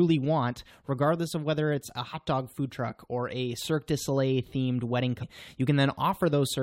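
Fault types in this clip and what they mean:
Damaged data in a compressed stream: part of the encoded bitstream is corrupt, so the decoder cannot read the frame there properly, loses sync and has to search for the next valid frame header before it can carry on. In this speech clip that comes through as one brief blip at about 2.13 s, shorter than 20 ms, falling between "of whether it's a" and "dog food truck or".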